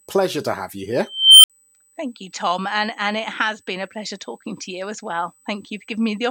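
Current drawn by the USB bus in 125-microsecond microframes is leaking into the audio through the power or ground, and this USB whine runs through the whole speech recording. It sits at a fixed 8 kHz, exactly the microframe rate, at about 35 dB below the signal. The result is a thin, high-pitched tone laid over every part of the clip.

From 1.08 s to 1.50 s, a recursive filter becomes an unstable filter. Its coefficients let the output feed back on itself and grow without bound. A tone of around 3 kHz swells over 357.1 ms into a piercing squeal that clips. The arithmetic then overflows, and the output drops to silence for 58.67 ms until the filter resets and the speech resumes.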